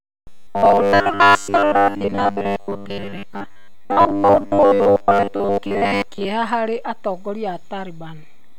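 From 0.01 to 6.27 s, robotic sound from repeated short buffers: the speech becomes a rigid metallic 100 Hz buzz, likely from around 10 ms chunks looping in place of most of the missing audio. A spectrogram shows evenly spaced horizontal harmonic stripes every 100 Hz, and the waveform shows near-identical repeating cycles.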